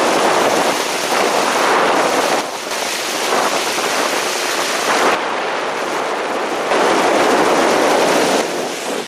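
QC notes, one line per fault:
2.41–2.71 s, 5.15–6.71 s and 8.41 s to the end, one channel drops out: three times the level falls abruptly by about 6 dB and then recovers, except the last, which stays low through the end. The likely cause is one stereo channel going silent, so after the mono sum only half of the shared signal remains.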